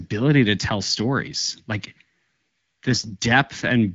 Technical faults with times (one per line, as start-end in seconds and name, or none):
2.89-3.16 AMR bit errors